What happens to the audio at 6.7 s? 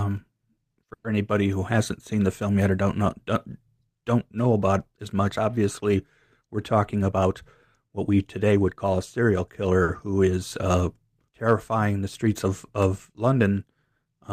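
Around 6.7 s the speech is caught in a jitter buffer speed-up running from 6.41 to 7.41 s. The receiver, holding more audio than it targets, trims short pitch-period pieces repeatedly, playing about 8% faster at unchanged pitch and dropping roughly a tenth of a second, so it sounds hurried. On a spectrogram the harmonics stay level while syllables compress in time.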